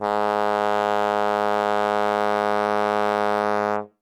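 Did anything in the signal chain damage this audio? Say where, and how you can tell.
Yes. The music carries a harsh, gritty fuzz on its loud moments throughout the clip. That is hard clipping. The signal overdrives a converter or fixed-point stage by about 7 dB, so about 4% of the samples are sheared flat, spraying high harmonics.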